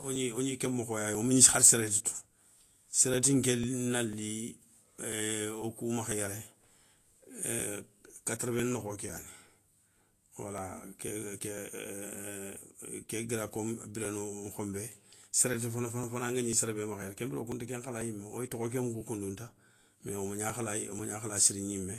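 Periodic USB or driver dropouts run from 0.16 s to 21.49 s in this speech recording, one tick every 0.5 s. Each time, a background task seems to stall the audio driver or USB transfer and a few milliseconds of signal are skipped outright rather than filled with silence. The resulting jumps in the waveform come through as evenly spaced clicks that stand out wherever the speech has energy. Vorbis compression is audible throughout as a hissy, grainy treble, roughened tonal detail and softened consonant attacks, with nothing above 14.2 kHz. That pattern points to a low bitrate of around 34 kbps. The likely cause is a Vorbis encoder that smooths the spectral floor and quantises the upper residue so coarsely that fine high-frequency structure turns into noise of similar energy, while the lowered cut-off removes the top band entirely.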